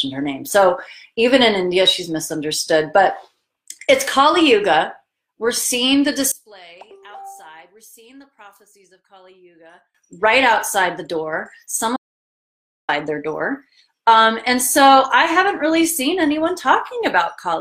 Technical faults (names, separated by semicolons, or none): one channel inverted; audio dropout to silence